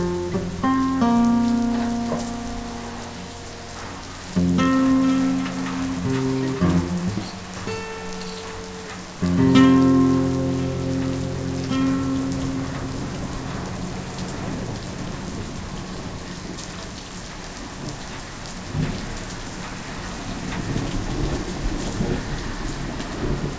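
Sounds, with no technical faults to be heard.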